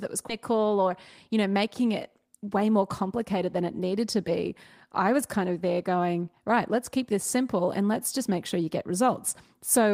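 A speech recording with two timing faults. At 0.29 s a skip ahead drops about half a second of speech with no fill, so the waveform shows two unrelated stretches spliced at a hard seam. From 0.50 to 2.28 s a jitter buffer speed-up trims pitch periods to shed about a tenth of a second, so speech runs about 6% fast at unchanged pitch. On a spectrogram the harmonics stay level while the syllables sit closer together.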